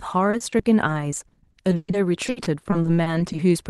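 From 0.30 s to 3.39 s the speech suffers repeated packet loss, heard as robotic sound. Some thirty holes open one after another, the longest about 120 ms. Each is bridged by stretching the preceding sound, so nearly a quarter of that span is patched audio. The result is choppy. On a spectrogram, smeared, frozen harmonic bands repeatedly replace normal detail beneath the roughly 12 kHz ceiling of the Opus call path, and the waveform shows flattened, repetitive segments.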